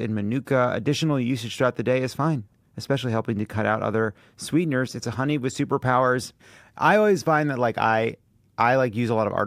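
Nothing audible to flag anywhere in the clip.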